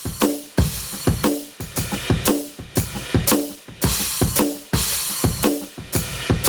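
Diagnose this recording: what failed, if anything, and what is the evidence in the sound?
Gain pumping runs through the whole music clip: a fast gain reduction pulls the level down on each loud hit, so loud and soft parts sit closer together and the sound is squashed, with the level swinging by something like 25 dB. The likely cause is input gain set far too high at the microphone and converter stage, with a fast limiter clamping each peak. On a waveform the envelope looks flattened, peaks held to one ceiling.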